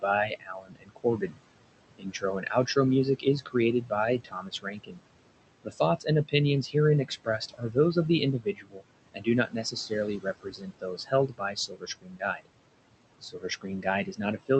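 A speech recording with noise suppressor artifacts throughout. Room noise sits about 15 dB below the speech. Between phrases the suppressor pulls that noise down by about 21 dB, so the background pumps in and out with the speech. Speech cut by the noise suppressor occurs at 0.02–1.35 s, 1.96–2.77 s, 3.19–4.99 s, 5.64–6.34 s, 7.08–12.47 s and 13.21–14.5 s. The suppressor mistakes soft speech for noise and turns it down with the background, by up to about 22 dB. Quiet consonants and word endings sound swallowed. The longest stretch loses around two seconds of sound in scattered pieces.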